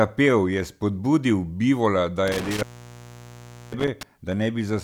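From 2.28 to 4.03 s, an intermittent contact, a loose cable or plug, opens for about 1.10 s, dropping the speech to faint hiss with crackle at each edge.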